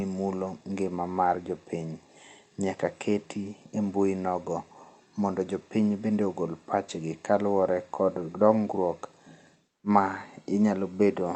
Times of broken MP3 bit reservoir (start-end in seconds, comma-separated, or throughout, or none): none